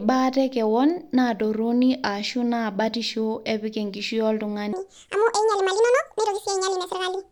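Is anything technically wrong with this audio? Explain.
Yes. From 4.73 s to the end is a section at the wrong speed: a clock mismatch likely plays it 1.79 times fast, raising the speech about ten semitones and hurrying it.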